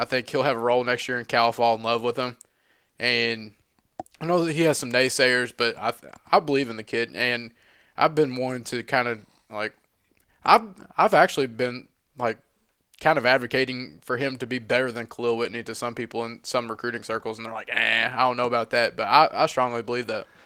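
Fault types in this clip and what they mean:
Nothing here calls for a line, since no fault turns up anywhere in this bit of speech.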